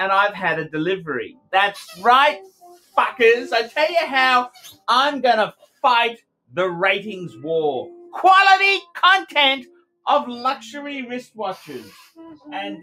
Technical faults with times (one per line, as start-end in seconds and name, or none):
0.00-12.83 noise suppressor applied to music or sounds
1.29-1.53 sound cut by the noise suppressor
2.47-2.97 sound cut by the noise suppressor
4.55-4.85 sound cut by the noise suppressor
5.52-5.83 sound cut by the noise suppressor
9.66-9.83 sound cut by the noise suppressor